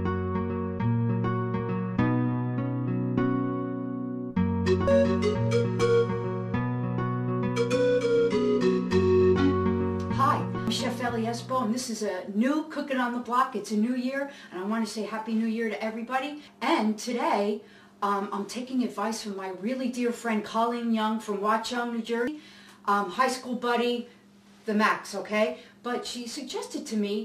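A recorder likely dropping audio between 6-second chunks causes audio missing between chunks at 4.88, 10.68 and 22.28 s: abrupt skips, each losing about a fifth of a second.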